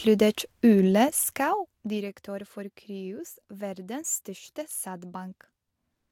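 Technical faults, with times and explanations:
1.07–2.13 s, zipper noise: during this stretch the speech level drops by roughly 15 dB. The drop is not a continuous ramp but a staircase of about 2 dB jumps, around ten per second, with no smoothing between them. Each jump changes the waveform's gain instantly, leaving a small discontinuity that clicks. Those clicks repeat at the step rate and ride on the speech as a fine ticking or zipping while the level falls.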